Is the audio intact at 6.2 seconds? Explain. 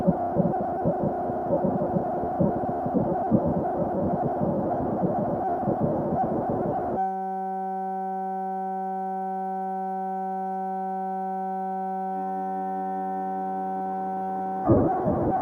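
No, a noise suppressor applied to sound runs throughout, including 6.2 s. Treating steady tones and tails as noise, it ducks them by around 5 dB, so the sound pumps and thins.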